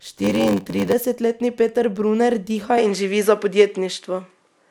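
From 0.00 to 0.93 s the speech carries a steady buzz at 93.8 Hz and runs slow, at 0.861 times normal speed, with the pitch essentially unchanged. This is a block size mismatch (padded): one stage delivers blocks shorter than the next stage reads, and the remainder of each read is zero-filled. The buzz rate fits a 512-sample read block, with a brief gap of silence inserted in every block.

At 2.78 s the tone of the speech changes abruptly and stays changed to the end. The top end sounds duller and narrower. A new background noise floor appears well below the speech, and the level shifts by a few decibels. There is no silence at the transition. The likely cause is the input being switched to a poorer device mid-recording, with that device's narrower band, different tone and own noise taking over.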